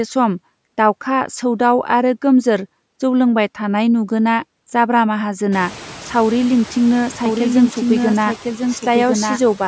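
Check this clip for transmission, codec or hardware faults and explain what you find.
Two faults are audible: noise suppressor artifacts across the whole clip, and a doubled audio track over the last couple of seconds.

Throughout, the background dips between phrases and swells back under the speech, and the room noise climbs by about 23 dB near 5.5 s. The dips and swells are noise suppressor artifacts; the climb is real background noise in the room. The suppressor estimates the steady noise and pulls those bands down frame by frame, here by about 11 dB, so the gating follows the speech.

From 7.26 s to the end, a second copy of the speech runs underneath the first, about 5 dB quieter and roughly a second behind, full-band and dry, with no room tail. It cuts in abruptly rather than building up. This is a doubled audio track, most likely the same signal captured again through a slower path and mixed back in, which would explain the fixed lag and the identical timbre.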